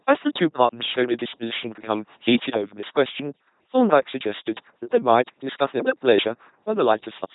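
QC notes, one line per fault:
Throughout, LPC-10 vocoder: the speech is a heavily damaged, buzzing robotic rendering, with each moment excited by either a pulse train or noise, so voicing errors give stray buzz or hiss. There is nothing above 3.8 kHz, which fits a 2.4 kbit/s coding rate.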